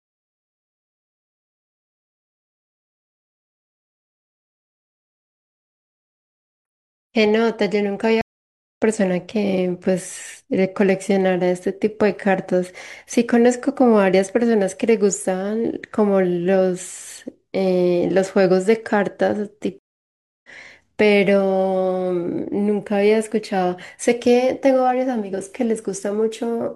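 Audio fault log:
8.21–8.82 s and 19.79–20.49 s, stream reconnect: the speech drops to about 0.56 s and then about 0.65 s of silence, and each time it comes back roughly 0.7 s further on, so a short stretch of talk goes missing, with the first moment of sound muted or fading in. The connection broke, the player went quiet while it reconnected, then started a fresh decoder partway into the live stream.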